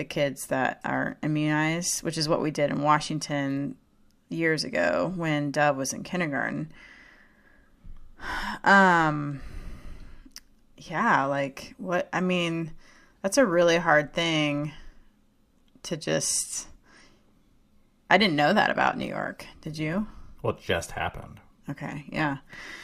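Speech, and from 18.68 s to the end at 22.84 s it's an adaptive stream at a lower bitrate: the quality drops suddenly and codec artefacts rise, with no gap. That's the player switching down when the connection slowed, which fits Opus stepping from 64 to 24 kbit/s.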